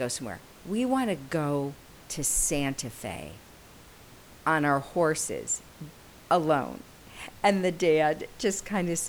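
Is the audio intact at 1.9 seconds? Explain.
Yes, at 1.9 seconds the speech is intact, with only the room's own background noise sitting about 24 dB below it.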